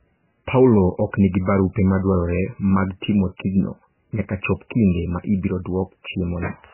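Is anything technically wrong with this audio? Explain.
Yes. Throughout the speech, a heavily starved encoder has likely applied MP3 compression, at a bitrate that fits something around 9 kbps. With so few bits, the encoder discards weaker frequency lines, and they flicker in and out from one frame to the next. It also cuts the treble entirely, leaving nothing above 3 kHz. The result is a dull, watery, swirling sound, with metallic chirps on s sounds and smeared consonant onsets.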